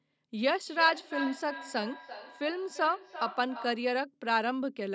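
From 0.67 s to 3.97 s the speech carries a feedback echo between two devices: a second device in the same room plays the call back, its sound re-enters the first microphone, and neither echo canceller removes it because each only cancels its own playback. The speech returns at a regular interval of roughly 0.3 s, peaking about 11 dB below the direct voice. Distinct, evenly spaced repeats set it apart from room reverberation, which decays smoothly.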